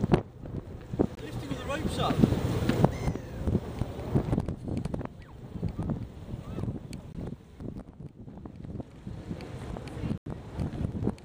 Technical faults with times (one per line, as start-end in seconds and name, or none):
1.15-1.17 block of digital silence
7.13-7.15 block of digital silence
10.18-10.26 block of digital silence